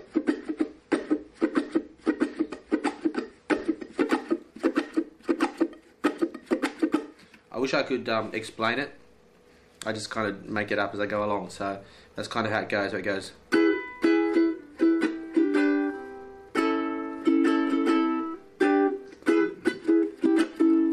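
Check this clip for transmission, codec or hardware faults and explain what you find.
There is one fault. From 0.0 to 4.0 s the audio sounds dull and swirly, empty above 10.6 kHz, then clears abruptly with no gap. This is an adaptive stream starting at a low bitrate, which switches up once the player has measured the connection.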